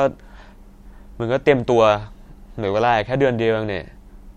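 No technical faults are audible.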